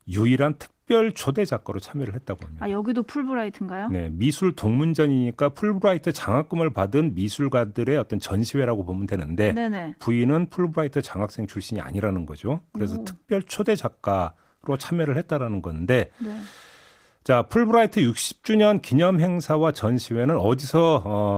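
No technical faults can be heard anywhere in this speech recording. It carries Opus voice compression in its hybrid mode, with the full audio band kept and only light coding traces, which fits a rate of around 20 kbps.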